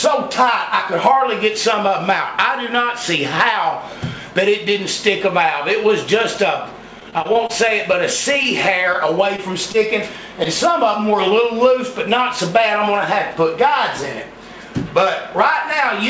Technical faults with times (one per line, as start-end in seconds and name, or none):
7.00-9.76 repeated packet loss (robotic sound)
12.21-13.53 jitter buffer speed-up